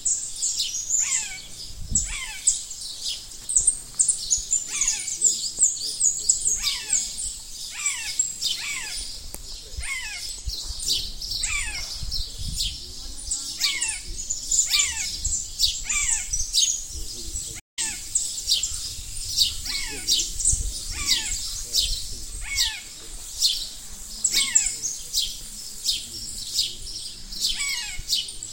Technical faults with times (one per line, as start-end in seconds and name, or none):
17.59-17.79 playback stall